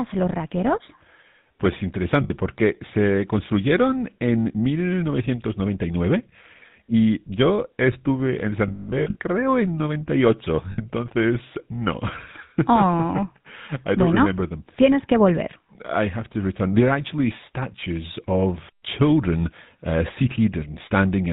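Throughout, the speech carries the GSM full-rate codec. It models the vocal tract and rebuilds the excitation from sparse pulses. Nothing above 4 kHz survives. The result is a plainly audible buzzy, gravelly roughness, consistent with a 13 kbps link.

Lost GSM frames follow. At 2.24 s, just before "porque se construyeron en", 60 ms is patched by repeating the last good frame. It rings metallic and rough. Another brief ring falls at 6.89 s, which fits two dropped frames. From 8.68 to 9.19 s, between "estuve en" and "creo en", losses scatter over 520 ms. The longest run is about 150 ms. A last 60 ms ring comes at 10.72 s.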